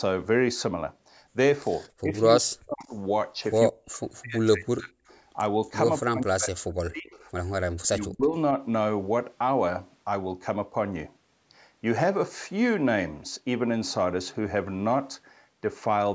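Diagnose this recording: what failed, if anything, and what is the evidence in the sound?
Echo leak, call processing: faint copies lagging 227 ms, about 35 to 40 dB down, at 1.84–1.89, 2.86–2.93 and 4.81–5.2 s, likely uncancelled loudspeaker pickup.

Speech suppressed in double talk, call processing: level dips of up to about 40 dB at 2.01–2.91, 3.69–4.99, 6.07–7.15 and 7.77–8.36 s, likely the canceller ducking overlapping talk.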